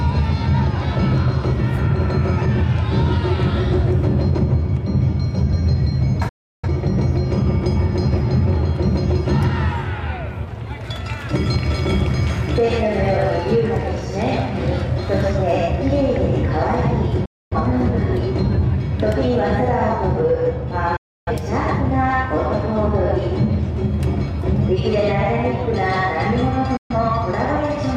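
The sound fades out within about 8 ms and falls silent at 6.29 s for 0.34 s, 17.25 s for 0.26 s, 20.96 s for 0.30 s and 26.77 s for 0.13 s. Each is a digital broadcast dropout: the receiver muted on lost or corrupt frames, and that audio is gone.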